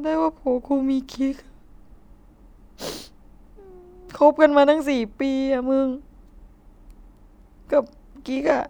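Listening to this speech recording, nothing technically wrong stood out.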